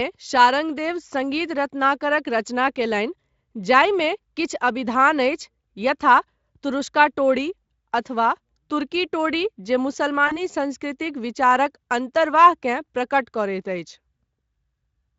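At 10.27 s, after "टोडी जे", VoIP packet loss concealed by the speech codec stretches the last sound into a buzzy tone or coloured noise that fades until 10.38 s: tapering waveform envelope.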